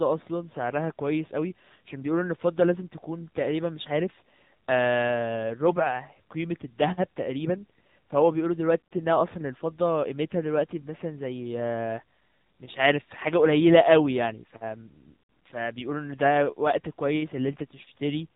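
Throughout, the AMR narrowband mobile codec removes all content above 4 kHz and adds a buzzy, synthetic edge, consistent with a 7.4 kbps mode. Low-pass filtering alone wouldn't buzz.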